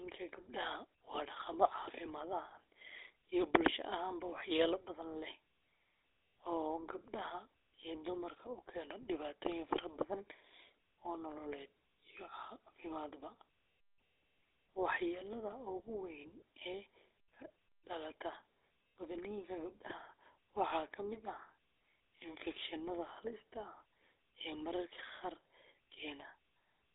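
Speech, and the whole clip has passed through the GSM full-rate codec. The band is narrow, roughly 250 Hz to 3.7 kHz, with nothing above 3.8 kHz. The codec models the vocal tract and rebuilds the excitation from a sparse grid of regular pulses. That leaves a plainly audible buzzy, gravelly roughness on every voiced stretch. The damage is steady from start to end, and it fits a 13 kbps GSM full-rate phone link.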